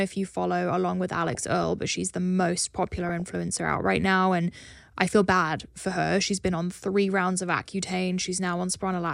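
Speech with short blips of noise in single sub-bands from 1.14 to 1.68 s and 2.88 to 3.22 s: DAB burbling, where weak-reception bit errors get past error correction into the MP2 audio data.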